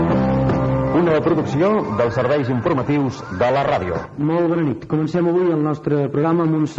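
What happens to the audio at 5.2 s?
Nothing goes wrong at 5.2 s; the audio continues intact through that moment.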